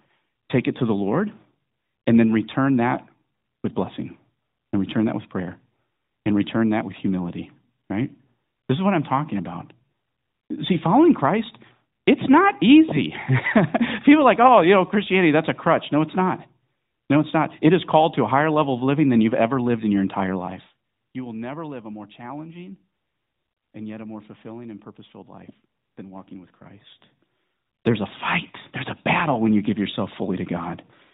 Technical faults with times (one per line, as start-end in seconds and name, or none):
none